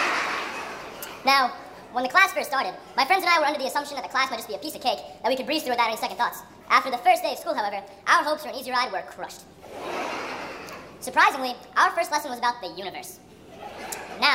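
From start to finish the sound runs hurried and shrill, about half again faster than natural and raised by roughly seven semitones, a fifth. This is a wrong sample rate: the samples are played too fast without conversion, a 1.5 ratio that fits 32 kHz material played at 48 kHz.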